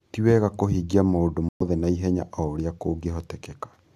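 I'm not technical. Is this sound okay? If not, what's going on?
No. At 1.49 seconds the speech abruptly cuts to silence for about 0.13 seconds, until 1.62. This is a corrupt frame muted. Some compressed chunks of audio got damaged, the player could not decode them, and it played silence instead. Timing stays intact.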